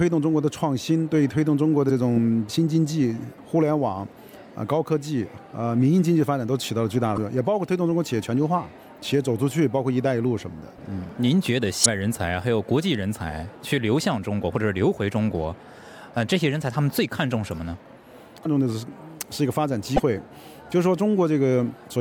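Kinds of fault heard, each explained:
Damaged data in a compressed stream: corrupted bytes in the encoded file make the decoder misread frames and lose sync until it finds the next frame header. This produces five brief blips of about 40 ms each, at 1.86, 7.14, 11.82, 18.42 and 19.96 s.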